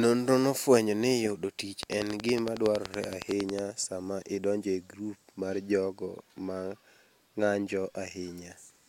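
Speech carries a train of clicks from 1.83 to 3.60 s: around twenty near-identical pulses at a steady 10.8 per second, standing well above the voice. That even spacing and repeated shape set it apart from random crackle, and it likely comes from nearby electrical interference.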